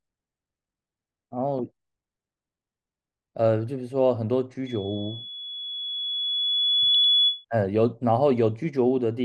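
Throughout, the speech sounds dull and gurgling, with granular distortion and upper bands flickering out. This is likely MP2 compression, and the degree of damage points to a low bitrate near 80 kbps. From 4.66 s to 7.45 s a loudspeaker feedback squeal appears: a 3.4 kHz tone swells over roughly two seconds as the microphone-loudspeaker loop runs away, ending about 5 dB above the speech. Between 6.94 s and 7.04 s, DAB burbling adds short blips of noise as bit errors corrupt the MP2 data in single sub-bands. The sound fits an error rate of a fraction of a percent.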